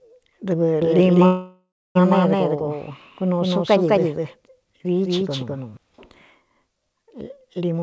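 From 0.82 to 5.77 s, a doubled audio track is heard. A second full-band copy trails about a fifth of a second behind, at about equal level. It likely comes from a second capture path.

From 1.26 to 1.97 s, a call audio freeze occurs. The last sound is stretched into a fading buzz, then about 0.27 s of silence. The likely cause is delayed packets draining the jitter buffer. The audio resumes where it stopped, with nothing lost.

From 7.69 to 7.82 s, a jitter buffer speed-up begins. Short pitch-period pieces are cut repeatedly, removing about 150 ms. The sound runs roughly twice as fast, hurried but at unchanged pitch.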